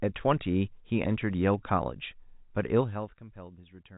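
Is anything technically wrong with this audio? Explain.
No, nothing here sounds technically wrong.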